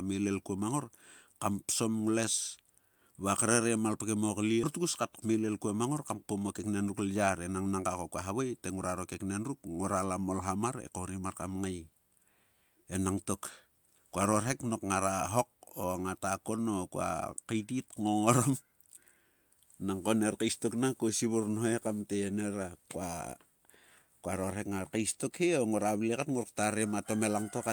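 A jitter buffer speed-up runs from 6.59 to 7.73 s. The receiver trimmed short pitch-period slices to drain excess buffered delay. Speech plays about 12% faster at unchanged pitch, sounding hurried, with roughly 150 ms removed.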